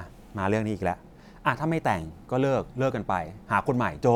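No technical faults can be heard anywhere in the speech. There is nothing to place on a timeline, since no event interrupts or alters the audio at any point.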